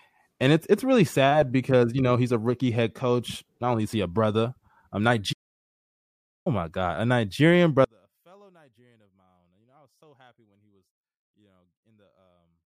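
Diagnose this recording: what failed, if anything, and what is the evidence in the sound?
Playback stall from 5.32 to 6.47 s: the speech cuts out mid-flow for about 1.13 s of silence, then resumes. This points to the playback stage, likely a player starved of buffered data or a blocked audio thread that produced nothing until it recovered.

One channel inverted from 7.85 s to the end: heard in mono, the centred speech collapses by about 36 dB, leaving a faint residue. The likely cause is reversed polarity on one stereo leg in the analogue wiring, so shared content cancels when the channels sum.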